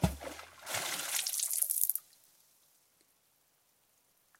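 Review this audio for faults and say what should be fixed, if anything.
Pre-emphasis left on from 0.67 s to the end. Treble was boosted without the matching cut, about 11 dB at 10 kHz, fitting a J.17 curve, so the sound is thin and bright. Apply the matching de-emphasis at the receiving or playback end.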